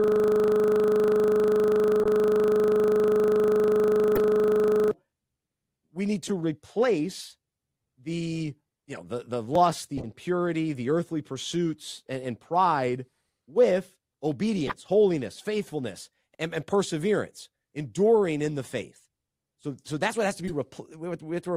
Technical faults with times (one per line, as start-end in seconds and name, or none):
0.00-4.91 system hang loop
2.02-2.06 corrupt frame decoded
4.15-4.18 corrupt frame decoded
6.27-6.31 corrupt frame decoded
9.98-10.08 corrupt frame decoded
14.67-14.75 corrupt frame decoded
17.37-17.44 corrupt frame decoded
20.48-20.54 corrupt frame decoded